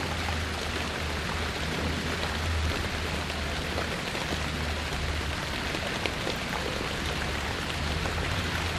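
Throughout, the sound is dull and grainy, with a gurgling edge. This is MP2 compression, likely at a low rate. The damage fits about 80 kbps. With so few bits, upper sub-bands switch off and flicker. The remaining bands are coarsely quantised.

From 1.42 to 1.46 s comes a brief burst of DAB burbling. It is a short patch of noise blips. A small share of bit errors slipped past error correction. Corrupted samples put short blips of noise into single sub-bands across a handful of frames.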